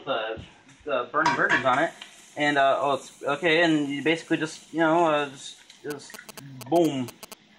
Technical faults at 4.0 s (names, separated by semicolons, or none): none